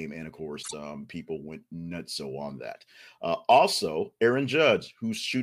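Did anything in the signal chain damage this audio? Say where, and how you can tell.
Yes: frames out of order at 0.62 to 0.74 s, before "um people went nuts". Two adjacent 26.1 ms blocks swapped in transit, causing a garbled flutter.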